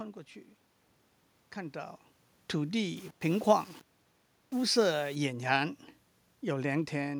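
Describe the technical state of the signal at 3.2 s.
At 3.2 s the speech is inside a gritty, grainy stretch from 2.97 to 5.15 s. The likely cause is low bit depth without dither: samples rounded to about 7 bits, so the error rides on the speech at roughly 25 dB below it. Unlike the room noise, this grain rises and falls with the speech rather than sitting at a constant level.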